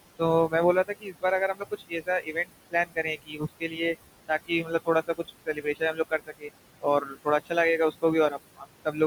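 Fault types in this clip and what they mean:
Noise suppressor artifacts: The suppressor estimates the steady room noise, which sits about 13 dB below the speech, and turns down every band it judges to be noise by about 20 dB, frame by frame. Between phrases the background sinks and then swells back under the speech. On a spectrogram the gaps look unevenly darkened, with isolated flickering specks of leftover noise. The waveform shows near-silent pauses.
Speech cut by the noise suppressor: The suppressor mistakes parts of the speech for noise and pulls them down along with the background, so soft sounds come out swallowed or faint. This happens across 0.87 to 3.96 s and 4.28 to 7.52 s, with roughly a second affected in each and drops of about 21 and 22 dB. It happens again from 7.91 to 8.98 s, with roughly a third of a second affected and a drop of about 18 dB. Spectrograms show speech energy abruptly blanked in patches, and waveforms show sudden amplitude dips.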